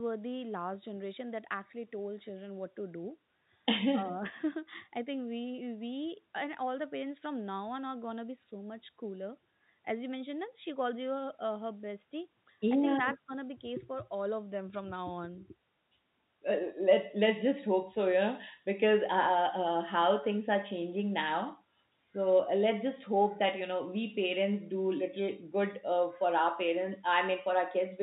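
Nothing here stands out as a technical problem: it's a speech recording with the usual narrow, phone-line character of G.711 telephone coding.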